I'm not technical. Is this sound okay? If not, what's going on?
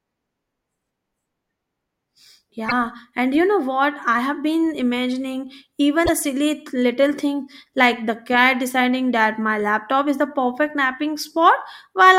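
No. At 2.68 s, just before "and you know what", and at 6.05 s, between "I have been imagining" and "silly little thing like", the speech briefly jumps ahead. This is likely a broken MP3 bit reservoir, where a missing chunk leaves the next piece decoding garbled data, unlike a plain dropout, which would just go silent.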